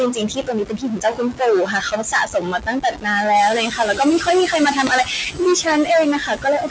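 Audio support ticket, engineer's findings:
Stuck bit, throughout. One converter or data-line bit likely held at a fixed value, so about half the samples are off by that bit's weight. Result: distortion riding on the signal, and the pauses are filled with noise instead of going quiet.

Noise suppressor artifacts, throughout. Per-frame band gains are cut wherever the suppressor reads steady noise. Residual background pumps down between phrases and back up under speech.

Speech cut by the noise suppressor at 0.11–1.42 s (about 17 dB), 1.65–3.07 s (about 16 dB), 3.66–4.0 s and 4.19–4.28 s (about 9 dB each), 4.72–5.4 s and 6.19 s to end (about 14 dB each). Speech is misclassified as noise, so soft consonants and endings sound swallowed.

Noise suppressor catching up, 3.34–3.59 s. Room noise jumps by about 14 dB near 3.5 s, and the noise estimate lags. The louder background passes with less reduction at first, then sinks by about 8 dB as the estimate adapts over 250 ms.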